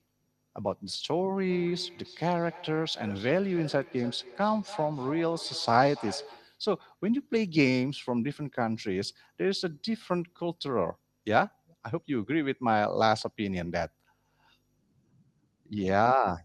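From 1.5 to 6.57 s, feedback echo between two devices: the speech returns about a third of a second later, peaking at about 16 dB below it. Two devices in one room share the call, and neither echo canceller removes the other's playback. Unlike reverberation, the repeat is a distinct, evenly delayed copy.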